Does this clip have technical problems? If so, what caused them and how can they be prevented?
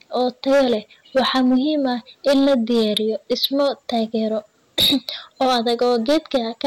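Yes. Hard clipping runs throughout this speech, overdriven by about 11 dB. Peaks flatten, adding harsh fuzz on roughly one sample in twenty. Prevent it by lowering input gain.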